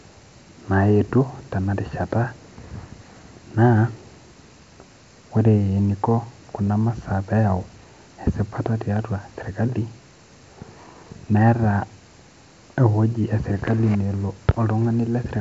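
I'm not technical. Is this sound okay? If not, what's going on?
Yes, nothing in this speech recording has gone wrong. It has passed through G.722 wideband telephone coding, a phone-line format that keeps more of the high end than an ordinary call so it sounds fuller, and any trace that coding leaves is faint at most.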